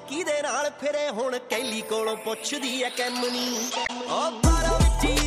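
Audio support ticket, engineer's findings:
Damaged data in compressed stream, 3.84 to 3.90 s. Brief garbled burst, about 60 ms. Probable component: decoder input. Corrupted bytes in the stream; decoder misreads the affected frames, loses sync and hunts for the next valid frame header before output recovers.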